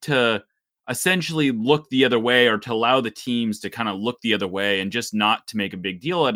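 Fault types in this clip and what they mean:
Pre-emphasis left on: the treble was lifted for recording, and the matching cut was never applied on playback. From 3.63 s to 5.63 s the speech turns thin, bright and hissy, with sibilants standing out sharply. The top end sits about 8 dB high at 10 kHz relative to 1 kHz. The shape of the lift fits the CD 50/15 µs curve. Outside that stretch the tonal balance does not show this lift.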